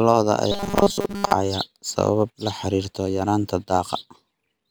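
Speech clip with robotic sound from repeated short buffers from 0.52 to 1.33 s, ending just before "sabab la". The voice becomes a rigid metallic buzz at 200 Hz, likely from a 5 ms fragment being looped for most of that stretch while fresh audio was skipped.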